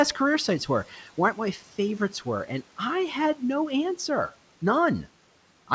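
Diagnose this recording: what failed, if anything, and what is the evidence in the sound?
Between 1.59 and 1.77 s the speech turns faint and swallowed, dipping about 9 dB for roughly 150 ms. This is speech cut by the noise suppressor, a call-processing stage that mistook quiet speech for background and turned it down with it.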